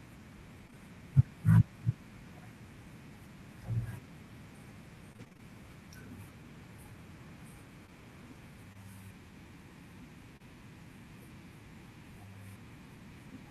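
Short concealed packet loss at 0.67 to 0.75 s, two overlapping 20 ms holes: the receiver extended the preceding sound to bridge them, leaving a brief smear. Repeated packet loss (robotic sound) from 5.13 to 5.41 s: six gaps up to 30 ms, with 43% of the stretch patched, giving choppy speech with pieces missing. Further short concealed packet losses of 20 ms each at 7.87 to 7.91 s, 8.73 to 8.77 s and 10.37 to 10.42 s are filled the same way, each heard as a small smear or wobble.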